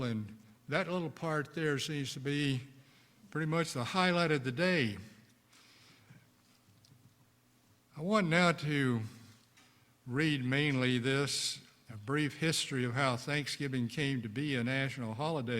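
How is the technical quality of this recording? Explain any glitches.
No glitches or faults are audible.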